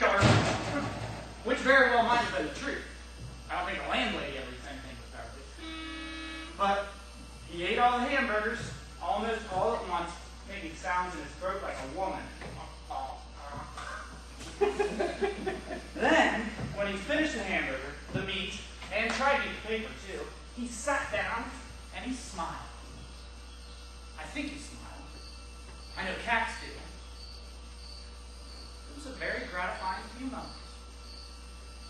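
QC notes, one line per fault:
Throughout, mains hum: a steady low tone at 60 Hz with a few low harmonics above it runs under the whole clip without a break, sitting not far below the wanted sound, roughly 15 dB down. A ground loop or a nearby transformer has let the power line leak into the signal path, so the hum rides the audio at the mains frequency and does not change with anything else in the recording.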